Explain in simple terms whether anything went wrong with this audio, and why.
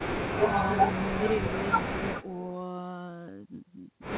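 From 2.21 to 2.45 s there is an echo leak: a very faint copy of the speech returns about 0.36 s late, likely because a loudspeaker's sound reached the far microphone and the echo canceller missed it. The call codec keeps everything below 4 kHz.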